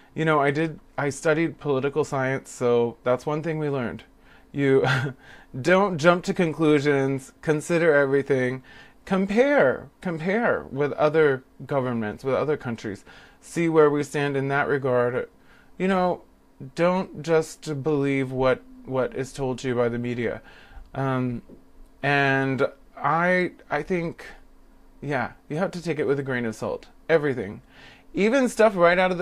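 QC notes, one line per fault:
No audible faults found.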